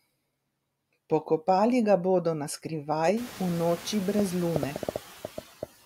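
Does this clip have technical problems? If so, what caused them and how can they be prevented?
Yes, two problems can be heard in this speech clip.

Noise suppressor artifacts run through the whole clip. The background drops away between words and creeps back up under them. A suppressor is cutting bands it judges to be steady noise, by about 15 dB, frame by frame. The room noise gets louder from around 3 s, giving it more to fight. Lowering the suppression strength, or reducing noise at the source, would prevent this.

A train of clicks runs from 4.19 s to 5.64 s: roughly ten similar ticks at an uneven pace of about six per second, standing well above the speech and audible in the pauses too. This is likely interference from nearby equipment or a faulty connection or power supply, injecting a pulse each time. Moving cables and devices apart and checking the connections and power supply would prevent it.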